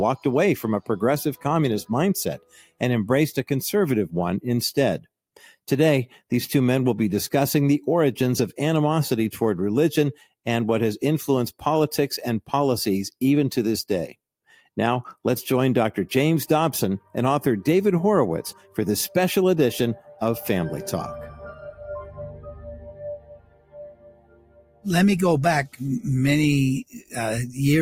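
A noise suppressor applied to music or sounds stays active throughout, pumping the level by around 10 dB as held material and tails sink while attacks pass. Unlike a compressor, it does not follow overall loudness. Sound cut by the noise suppressor drops sharply at 2.38–2.82 s (about 21 dB), 14.48–14.68 s, 17.0–17.15 s, 18.56–18.78 s, 21.52–24.86 s (about 22 dB) and 26.84–27.17 s (about 18 dB). Steady passages sink in level rather than distort as they would under clipping.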